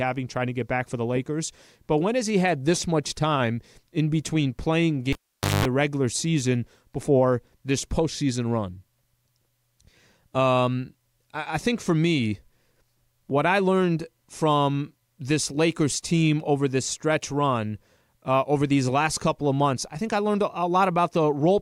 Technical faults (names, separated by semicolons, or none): cable pulled and plugged in